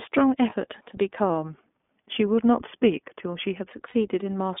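iLBC codec coding runs through this whole speech recording, passing only about 250 Hz to 3.6 kHz and leaving the voice rough and synthetic in the way that fits iLBC's 20 ms frames at 15.2 kbps. Lost iLBC frames at 0.50–0.53 s and 3.90–3.96 s, about 20 ms and 40 ms long, come out as a brief buzzy held vowel where the decoder repeated the last pitch cycle, and the voice is clean again immediately afterwards. From 1.30 to 3.70 s the speech plays about 5.2% slow and drops about 93 cents, nearly a semitone, then snaps back, most likely a drift correction step in clock-matching software.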